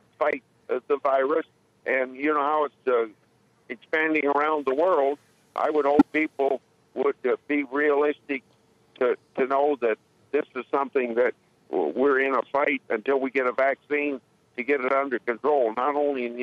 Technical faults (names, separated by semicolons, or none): corrupt frame decoded; pre-emphasis left on